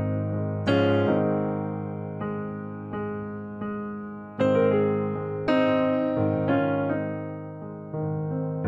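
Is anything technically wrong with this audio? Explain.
No, nothing in the signal points to a technical problem at any point in the recording.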